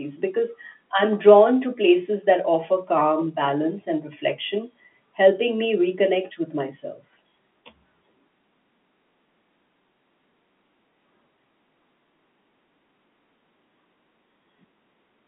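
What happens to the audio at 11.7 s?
At 11.7 s the audio is intact, carrying on as the same band-limited telephone speech of G.711 coding with nothing above about 3.8 kHz.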